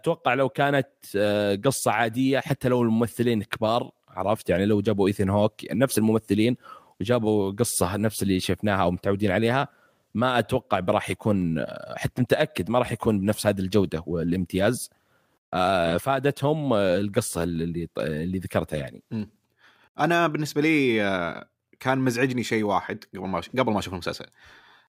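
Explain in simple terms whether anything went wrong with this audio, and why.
Nothing went wrong here: listening through this bit of speech, there's no glitch, dropout or odd noise anywhere to point to.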